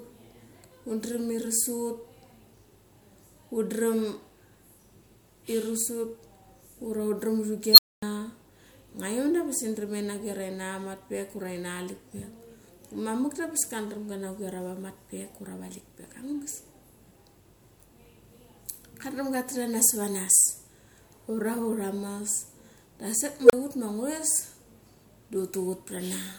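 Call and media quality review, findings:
Unstable filter, twice. At 7.72–8.03 s, a squeal around 4 kHz swells over 57 ms, clips, then drops to 245 ms of silence. At 23.42–23.53 s, a tone near 500 Hz builds for 74 ms, then a 32 ms gap before "ut ma". A recursive filter with bad coefficients is running away, overflowing, and resetting.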